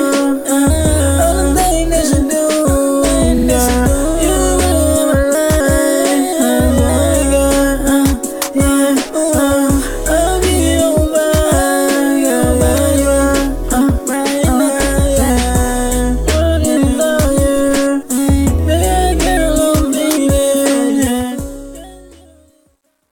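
A stutter interrupts the audio at 3.37 to 3.46 s, where a 46.4 ms block replays twice, and again at 15.26 to 15.28 s with one extra 23.2 ms repeat. These are repeated frames, with compressed frames duplicated in the stream, which lengthens the clip by about 116 ms. From about 21 s the smooth fade-out grows gritty, at its worst between 21.94 and 23.12 s. This is truncation distortion on a fade, with an undithered gain stage whose grainy steps point to roughly 10-bit resolution.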